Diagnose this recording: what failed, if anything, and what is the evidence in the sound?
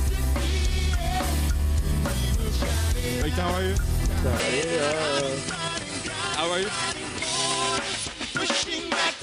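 The capture stage failed. At 4.40 s the sound narrows abruptly, with nothing above 10.3 kHz. It drops about 5 dB, and a new noise floor appears roughly 35 dB below it. There is no gap. The system likely switched to a poorer input device.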